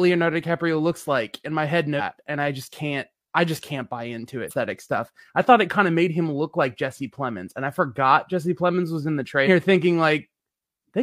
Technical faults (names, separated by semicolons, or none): damaged data in a compressed stream